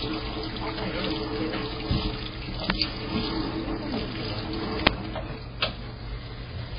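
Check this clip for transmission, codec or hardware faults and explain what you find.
Two kinds of fault are present: heavy lossy compression across the whole clip, and two uninitialised buffer bursts.

MP3 compression, throughout: the likely cause is an MP3 encoder starved of bits, at a rate consistent with something as low as 16 kbps. To save data it has cut all content above 5 kHz and discarded weaker frequency detail, which flickers in and out from frame to frame. The sound is dull and muffled, with a watery, swirling texture and smeared attacks.

Uninitialised buffer, at 2.70 s and 4.87 s: on each occasion, playback read a block of memory before any audio had been written into it, so leftover data was played as if it were sound. The first burst lasts 2.9 ms, which fits a 128-sample block. The second lasts 5.8 ms, which fits a 256-sample block. Each is heard as a brief, harsh, loud crack of digital noise.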